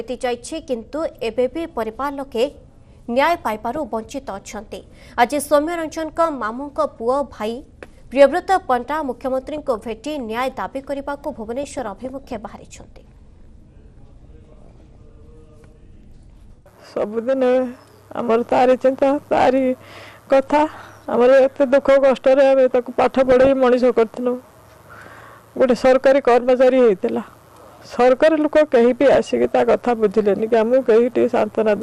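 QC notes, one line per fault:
Throughout, MP2 compression: the sound is dull and plainly gurgling, with a granular roughness, likely from MPEG Layer II coding at a low rate, which fits about 80 kbps. Too few bits force the encoder to shut off upper sub-bands and quantise the remaining ones coarsely. On a spectrogram, the top end stops at a ragged ceiling, with blocks of high-frequency energy flickering in and out from frame to frame.
3.3–3.86 s, 9.58–9.95 s, 11.63–12.36 s, 14.25–15.0 s, 23.04–23.5 s and 29.1–29.45 s, DAB burbling: burbling blips of noise sit over the programme for half a second or so each time. Bit errors of roughly 0.3 to 0.7 percent got through error correction into the MP2 data. Corrupted samples put short blips of noise in individual sub-bands, and corrupted scale factors make sub-bands jump in level for up to a frame. On a spectrogram these show as short, bright rectangular patches confined to narrow bands. 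The waveform shows brief irregular bumps.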